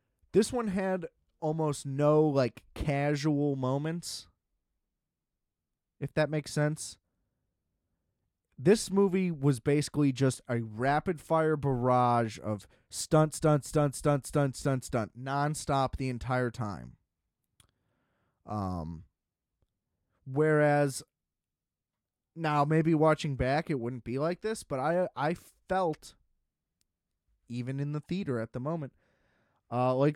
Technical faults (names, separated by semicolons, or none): resampler restarted on every block